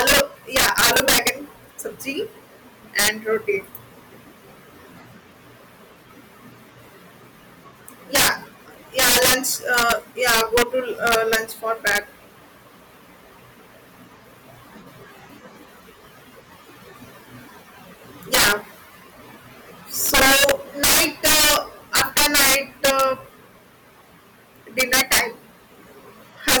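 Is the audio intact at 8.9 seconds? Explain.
No. Integer overflow runs through the whole clip, including 8.9 s: the signal is driven about 13 dB too hot, and instead of being limited, peaks past the integer maximum wrap to the opposite sign. On the loudest moments of speech this gives violent cracks, harsher than clipping.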